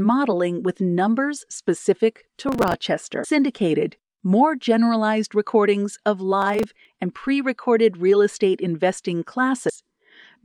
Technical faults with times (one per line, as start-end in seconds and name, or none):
2.48-2.74 processor overload crackle
3.20-3.25 damaged data in a compressed stream
6.42-6.95 processor overload crackle
9.65-9.70 damaged data in a compressed stream